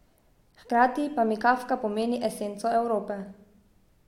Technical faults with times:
none

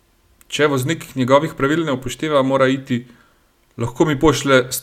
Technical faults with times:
none

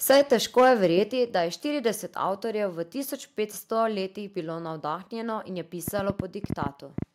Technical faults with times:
0.09-0.86 microphone overload
0.11 microphone volume stepped down
1.11 microphone volume stepped down
5.88-7.03 train of clicks

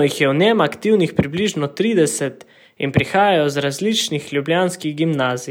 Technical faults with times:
4.10 dropped buffer (overrun)

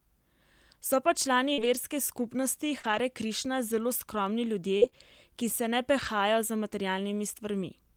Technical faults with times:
1.53-6.07 scattered short gaps

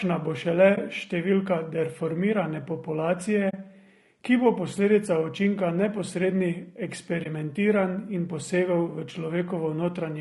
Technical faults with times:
0.00-10.20 low-delay AAC compression
0.75-0.78 AAC frame loss with muting
3.49-3.54 AAC frame loss with muting
7.23-7.26 AAC frame loss with muting

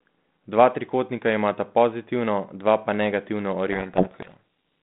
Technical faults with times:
3.72-4.37 codec payload misread

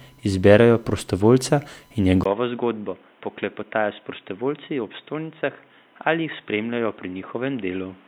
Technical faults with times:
0.00-8.07 USB whine
2.23-8.07 input switched to a poorer device

